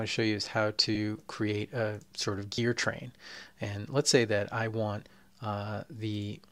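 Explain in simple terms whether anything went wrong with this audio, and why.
Two brief dropouts came from lost LE Audio frames: the Bluetooth link failed to deliver chunks of audio, so the receiver filled each gap by reusing the last sound with scrambled detail. At 0.95 s this fits one lost frame, and from 2.55 to 2.58 s about three, heard as a short noisy smear.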